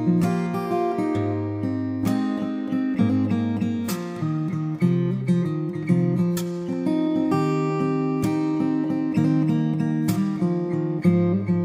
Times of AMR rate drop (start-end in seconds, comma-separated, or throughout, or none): none